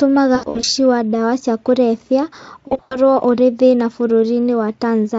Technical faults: VoIP packet loss concealed by the speech codec

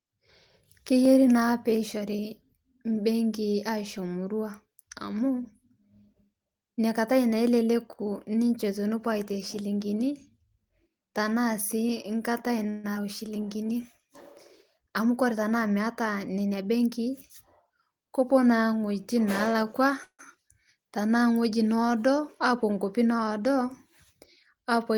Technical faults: dropped samples; call audio freeze; skip ahead; jitter buffer slow-down; jitter buffer speed-up

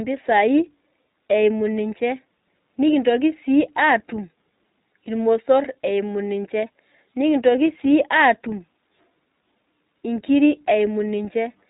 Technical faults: iLBC codec

